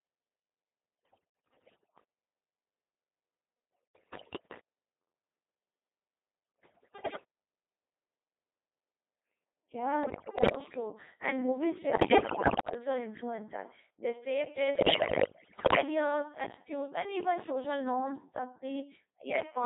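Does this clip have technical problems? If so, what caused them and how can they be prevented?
Yes. The whole recording has passed through the Codec 2 vocoder. The speech comes out robotic and buzzy within a band of roughly 250 Hz to 3.7 kHz, and the heavy, synthetic character fits a mode around 2.4 kbit/s. Unlike an ordinary low-bitrate waveform codec, which smears or gurgles the original, this sound is rebuilt from sine waves driven by pitch, voicing and envelope, so the real waveform is gone. Prevent it by using a higher-rate waveform codec where bandwidth allows.

Bit errors on digital voice radio cause six bursts: 1.05–2.04 s, 3.75–4.60 s, 6.60–7.24 s, 10.04–10.56 s, 11.94–12.74 s and 14.76–15.82 s, the last ending just before "attitudes and even social". Corrupted frame parameters make the pitch, level and tone colour jump into bleeps, warbles and gibberish, with error rates somewhere between a tenth and a fifth of bits. 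Unlike dropouts, the sound turns wrong. Prevent it with stronger signal margin or forward error correction.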